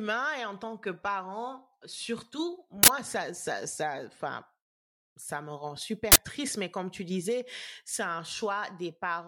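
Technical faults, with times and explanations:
2.83–2.88 s and 6.12–6.17 s, uninitialised buffer: two 46 ms bursts of loud digital noise where stale memory was played as samples, which fits a 2048-sample buffer.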